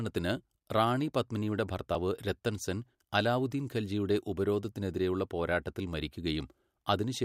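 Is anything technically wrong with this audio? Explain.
Yes. At 1.95 s, between "റാണി പത്മിനിയുടെ" and "രത്തൻ സെൻ അലാവുദ്ദീൻ ഖൽജിയുടെ", a small jump forward in the speech breaks the flow. This is likely a dropped buffer (overrun): roughly 20 ms of audio was overwritten before being read, and the surrounding pieces were spliced together.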